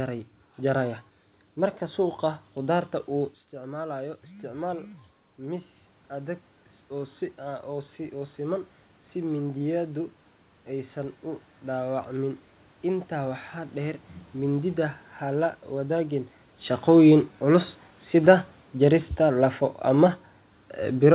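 From 3.51 to 8.65 s, automatic gain rising: the input dropped by about 11 dB when the talker moved back, and the control slowly added about 5 dB, so voice and room noise swell together. From 16.87 to 20.18 s, automatic gain falling: after the talker moved, the control eased gain down by about 3 dB, so the speech sinks along with its background.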